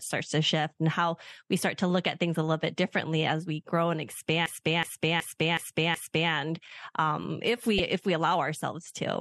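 At 4.46 s, after "as we grow and", a system hang loop repeats one 372 ms piece exactly five times until 6.32 s, a stutter at 2.7 Hz that fits a 16384-sample buffer cycling while the system froze. Unlike a skip, nothing is lost and each repeat is identical. At 7.76 to 7.80 s, between "um if" and "if we allow ourselves", damaged data in a compressed stream causes a brief blip as the decoder misreads corrupted frames and hunts for the next header, a single glitch rather than a repeating pattern.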